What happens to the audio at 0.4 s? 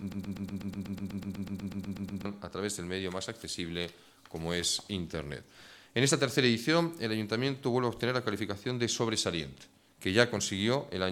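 A broken-record loop, likely from a stalled stream, runs from the start to 2.25 s, replaying one 123 ms fragment as a stutter; the waveform shows identical tiled blocks.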